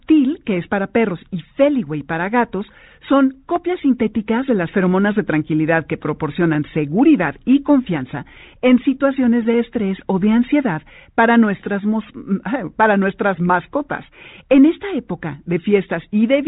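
Nothing stood out on listening to this speech, which comes through G.726 at 40 kbit/s with its band ending around 3.8 kHz as that telephone coding allows.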